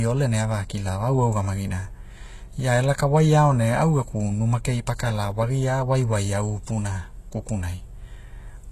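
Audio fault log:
Throughout: HE-AAC compression, likely. The speech has heavy codec damage, and nothing sounds above 12.3 kHz. The treble is rebuilt from copied lower bands, so its harmonics do not line up. S sounds turn gritty and lispy, which fits roughly 16 kbps.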